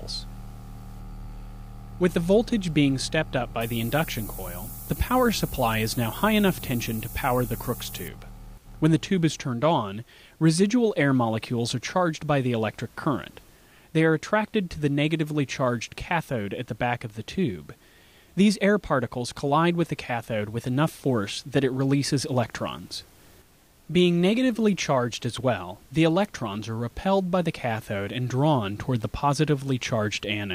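Low bit depth with noise shaping runs from 3.61 to 8.08 s. The audio is quantised coarsely, which fits roughly 6 bits, and the rounding error is pushed upward in frequency. This leaves a steady, thin hiss that climbs toward the top of the band, only around ten decibels below the signal.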